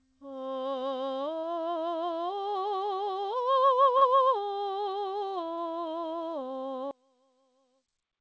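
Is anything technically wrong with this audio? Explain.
Yes. There are two kinds of fault in this music.

At 1.40, 3.98 and 5.54 s the music briefly smears and wobbles for about 60 ms. This is short concealed packet loss: about 30 ms of the call's audio arrived too late, and the receiver filled each gap by extending the preceding sound before blending back in. Through the G.722 call path, which passes nothing above 8 kHz, these patches register as brief smears or wobbles.

From 6.91 s to the end, the music suddenly drops by about 34 dB, leaving only a faint residue. The likely cause is one channel inverted. With one stereo channel's polarity reversed, everything common to both channels cancels when they are summed to mono.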